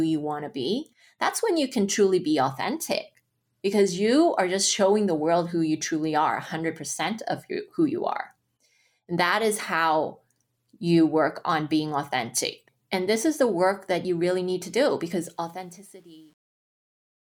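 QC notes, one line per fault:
15.22–17.32 s: truncation distortion on a fade. The fade-out keeps only about 9 bits without dither, so from 15.7 s the tail turns gritty.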